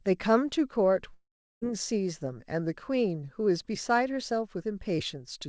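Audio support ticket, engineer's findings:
Long network dropout, 1.14–1.63 s: sound smears into a fading buzz, then about 0.36 s of near-silence; resumes with roughly 0.48 s missing. Likely packet loss concealed by jitter buffer. Spectrogram: repeated harmonic band decaying to blank gap, all under G.722's 8 kHz ceiling.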